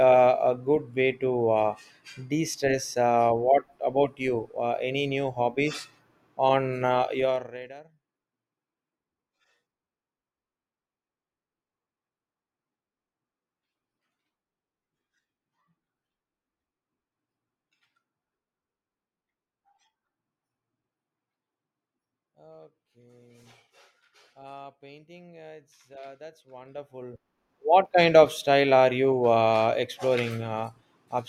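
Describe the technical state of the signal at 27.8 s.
At 27.8 s the speech is near the end of a stretch of zipper noise running from 26.48 to 27.92 s. The gain is being moved in unsmoothed jumps of 2 dB, about ten per second, adding up to a level shift of around 25 dB. Each jump puts a small discontinuity in the waveform, so a rapid ticking, zipper-like texture rides on the speech while the level travels.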